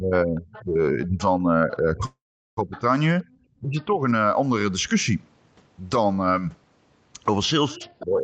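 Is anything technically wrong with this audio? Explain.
Yes, the speech has several call-path faults.

Speech suppressed in double talk runs from 0.0 to 4.01 s, with about 1.5 s affected in total, and again from 7.72 s to the end at 8.24 s. While both sides talked, the echo canceller likely could not tell the near talker from the loudspeaker echo and pulled both down, by roughly 20 dB at worst early on and about 15 dB at the end. The voice dips. On a waveform the envelope sags in patches.

The other side's voice leaks through from 0.53 to 1.21 s, from 2.72 to 3.85 s, and from 7.7 s to the end. Residual loudspeaker sound likely survived echo cancellation and was picked up by the microphone. It sits about 25 dB below the speech in the first stretch and about 20 dB below in the later two, heard as a faint second voice. A spectrogram shows a weak, separate harmonic pattern under the main one.

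A call audio freeze occurs between 2.05 and 2.59 s. Delayed packets likely drained the jitter buffer, and the receiver extended the last sound as a fading buzz or hiss before about 0.39 s of silence. This inserted roughly 0.52 s of gap, and nothing was lost. A waveform shows a decaying tail, then a flat line, then the speech resuming.

Background gated by the echo canceller appears from 3.27 to 3.31 s. The canceller clamped the microphone while the loudspeaker played, and the room sound drops by about 15 dB for roughly 40 ms. This is heard as a brief hole in the ambience. It shows as a thin vertical gap in the spectrogram's noise floor.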